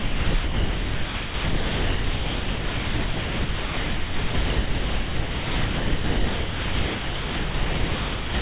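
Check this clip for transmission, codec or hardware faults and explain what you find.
Two faults are present, and they leave almost none of the original sound audible. The audio arrives over a call path whose codec points to G.711 mu-law at 64 kbps, with nothing above 4 kHz.

Low bit depth with dither affects the whole clip. The signal is rounded to what fits 3 bits, and dither is added before rounding, so the quantisation error turns into a steady, even white hiss only a few decibels below the sound itself. Undithered low bit depth would instead produce gritty distortion that follows the signal. Here the hiss is constant and uncorrelated with the sound.

Sound dropped by the voice detector occurs from 0.00 to 0.34 s and again from 0.44 s to the end. The sender's detector likely judged the sound to be background and stopped transmitting, and the receiver filled the gaps with comfort noise. 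What you hear is flat, featureless noise, with the actual sound surfacing only for about 100 ms between 0.34 and 0.44 s. Packet loss would leave short gaps or concealment artefacts rather than long stretches of smooth noise.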